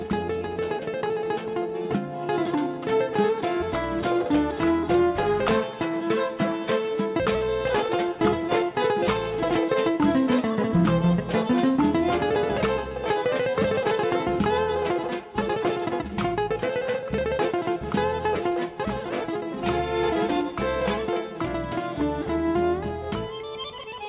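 Nothing is technically wrong with this audio, which has come through a G.711 mu-law call path that carries nothing above 4 kHz.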